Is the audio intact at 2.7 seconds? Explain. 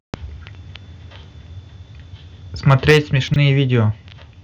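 No. Microphone overload runs from 2.67 to 2.98 s. Likely too much input gain drives peaks about 6 dB past the converter's limit, clipping them into a harsh crackle.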